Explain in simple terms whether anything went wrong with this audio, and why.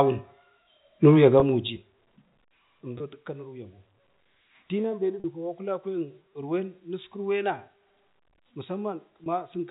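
Four short dropouts occur, caused by packet loss with pitch repetition. At 1.4, 2.98 and 9.24 s, about 20 ms of sound went missing. At 5.2 s about 40 ms did. Each time, the receiver filled the hole by repeating the last bit of the voice, so the sound briefly holds with a buzzy tone. The telephone coding itself passes sound normally.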